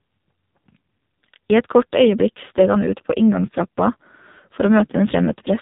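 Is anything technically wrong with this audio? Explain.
Yes. The AMR narrowband mobile codec has degraded the speech for the whole clip. Nothing above 3.8 kHz survives. A vocal-tract model with sparse pulses rebuilds the voice, making it buzzy and synthetic. The heavy damage suggests a low mode, around 5.9 kbps.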